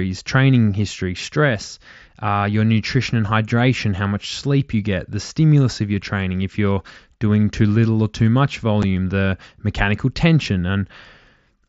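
Speech over a wideband mSBC Bluetooth headset link, with one brief hole at 8.82 s, right after "little or too much" and before "the mechanical tension": unconcealed Bluetooth headset packet loss, a gap of about 7.5 ms with hard edges that fits a single dropped headset packet replaced by silence or an idle pattern.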